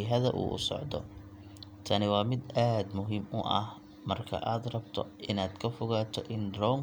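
A short recording of speech, with no technical problem to be heard anywhere in it. Nothing in the audio points to a fault in how it was captured, processed or delivered.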